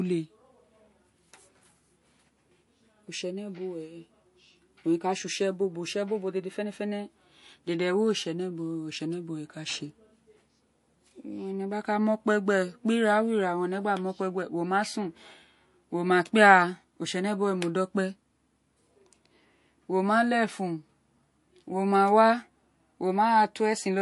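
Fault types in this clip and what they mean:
MP3 compression: The speech carries a plainly audible watery, swirling texture throughout, with s sounds turning metallic and nothing above about 11.3 kHz. This is likely a starved MP3 encoder, and the damage fits a bitrate near 48 kbps, where weak frequency lines blink on and off between frames. A plain low-pass filter would only dull the top end, but here the fluttering, chirpy grain within the remaining band marks it as codec loss.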